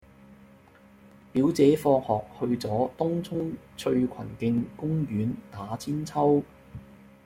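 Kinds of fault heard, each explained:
Dropped buffer (overrun): the speech breaks up three times, at 0.34, 1.37 and 5.31 s, each with a small jump where a sliver of sound, around 10 ms, goes missing and the two sides butt straight together with no gap of silence. The likely cause is the recording software not collecting its samples in time, so the hardware overwrote that block before it was read.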